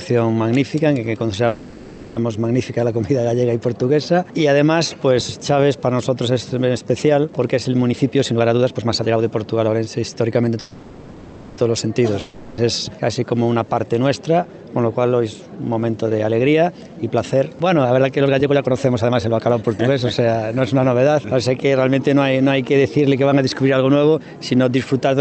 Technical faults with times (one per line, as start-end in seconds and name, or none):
1.47-2.18 call audio freeze
7.90-10.55 jitter buffer speed-up
10.60-11.60 call audio freeze
12.20-12.60 long network dropout
14.74-20.63 jitter buffer speed-up